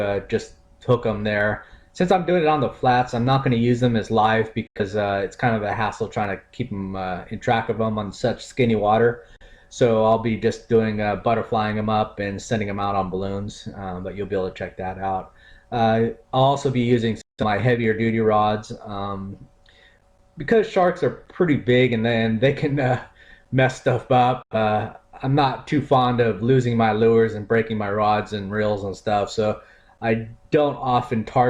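At 4.67–4.81, 9.36–9.46, 17.21–17.44 and 24.42–24.56 s, a digital broadcast dropout occurs: the receiver mutes with 3 ms fades, losing whole-frame chunks. The result is clean silent holes, not the clicks or smeared repeats of concealment.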